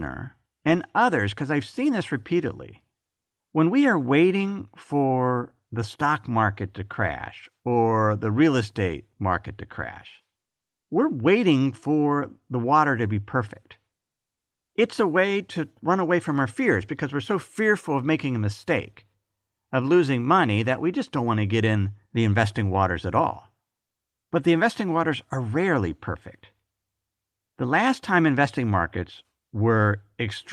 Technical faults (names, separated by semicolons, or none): none